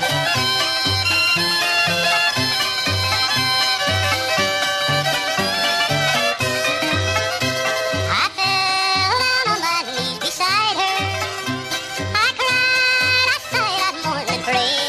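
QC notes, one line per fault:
Throughout: wrong sample rate. The whole clip runs 1.5 times too fast and sits about 7 semitones (roughly a fifth) too high, with speed and pitch shifted together by one fixed ratio rather than independently. That locked pairing points to material captured at 32 kHz being played back at 48 kHz with no resampling, so every sample is consumed early and the sound comes across high and hurried from start to finish.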